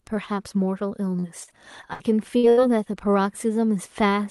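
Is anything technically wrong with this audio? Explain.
Yes. From 1.19 to 2.02 s there is repeated packet loss (robotic sound). Packets went missing five times, the longest gap 67 ms and about 180 ms in all. Each hole was patched by extending the last sound, so about a fifth of that stretch is filled-in material, heard as choppy speech with pieces gone.

There are also two bursts of packet loss, at 2.38 to 2.45 s and 2.49 to 2.59 s. Consecutive packets were lost, about 60 ms and then 80 ms of audio. The receiver stretched and faded the preceding sound over each gap, giving a brief held buzz or fading hiss before the speech jumps ahead with that part missing.

The call codec's path itself, with its top end ending near 12 kHz, fits Opus at a modest bitrate.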